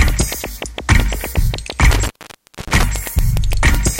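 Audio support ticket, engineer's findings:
Intermittent contact, 1.92–2.83 s: loose cable or plug connection opening mid-signal, line open for about 0.6 s in total. Audio drops out with crackle at the break and reconnect edges, leaving faint hiss while contact is lost.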